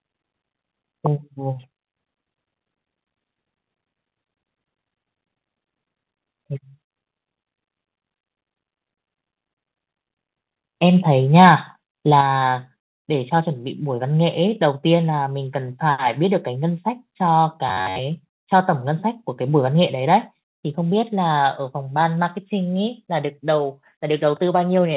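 From 11.35 to 11.52 s the loudest syllables break up with a harsh crackle. This is likely microphone overload: the peaks went about 3 dB past the converter's limit, so a small share of samples were cut flat. The waveform shows squared-off tops, and the spectrogram shows a smear of added harmonics.

At 12.21 s the microphone volume steps down by about 5 dB. Voice and background drop together, most likely because automatic gain control reacted to the clipped peak. The waveform envelope falls abruptly, and every band on the spectrogram dims from that point on.

From 17.69 to 17.98 s the voice becomes a rigid, metallic buzz that still roughly follows the speech. This is robotic sound from repeated short buffers. Most of the audio there is replayed fragments, which fits a buffer of about 10.7 ms. On the spectrogram this appears as evenly spaced horizontal lines on a 93.8 Hz fundamental, and the waveform repeats the same short cycle.

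At 20.37 s a second microphone volume step down, likely from the same automatic gain control, lowers the level by about 1 dB. It is a slight, sudden drop in the envelope and across the spectrogram. The whole clip, carried over G.711 mu-law at 64 kbps, has no energy above 4 kHz.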